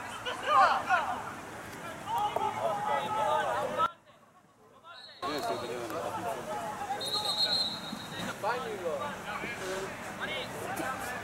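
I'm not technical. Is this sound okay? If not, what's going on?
No. There are two sudden gain jumps. At 3.86 s the level drops sharply and stays low until 5.22 s, then snaps back. At 8.19 s it briefly gets louder until 8.32 s. The background noise changes along with the sound, and the change is instant, not a fade. That sets it apart from a volume ride or an automatic leveller, which ease in. The likely cause is a level setting applied digitally with no smoothing.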